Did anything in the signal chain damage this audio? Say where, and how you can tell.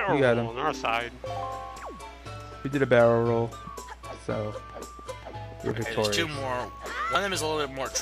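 Yes, a dropped buffer (overrun), likely at the driver stage: jumps at 1.77, 2.65, 5.71 and 7.15 s where about 50 ms vanishes, joined without the silence a dropout leaves.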